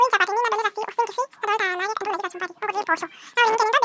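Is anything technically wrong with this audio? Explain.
Yes. A wrong sample rate affects the whole clip. The speech plays back twice as fast as it was captured, with no rate conversion, which fits 8 kHz audio being played at 16 kHz. Speed and pitch rise together, so voices sound hurried and a full octave (12 semitones) too high.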